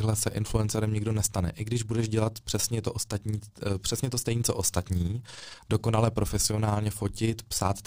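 Overlap-add ripple runs throughout the speech: frames were rejoined with overlaps not summing evenly, so level pulses about 6 dB at around 20 Hz, a rough flutter.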